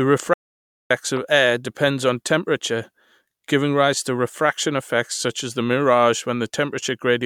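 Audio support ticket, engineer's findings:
Audio dropout to silence, 0.34 to 0.90 s. Signal cuts out for roughly 0.57 s and returns mid-flow. The gap is silent with no room tone, so the speech in that span is lost. Likely input path loss, such as a momentary device disconnect, a failed link or a stray mute, while the recorder kept writing silence.

Corrupt frame decoded at 1.17 s. Short glitch lasting about one codec frame. Probable component: decoder fed a frame with flipped bits and playing it anyway. Misread gains or codes put energy at the wrong frequencies for that frame only. A single frame is affected.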